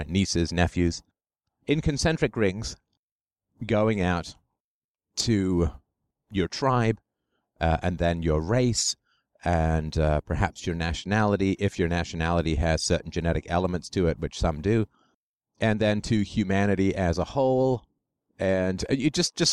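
At 5.2 s there's a single sharp click in the speech, likely dropped samples: a couple of samples go missing, so the waveform jumps abruptly between values.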